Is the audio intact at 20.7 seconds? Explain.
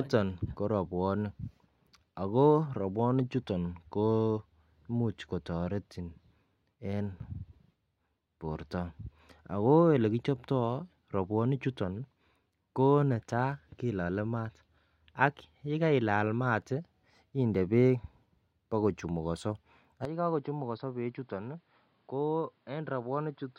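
No. The input likely switched to a poorer device at 20.05 s, just after "bokochumukonso ak", and stays there to the end. From that point the speech has nothing above 5.3 kHz and turns dull and boxy. It is roughly 10 dB quieter, with fresh background noise underneath, and there is no gap at the switch.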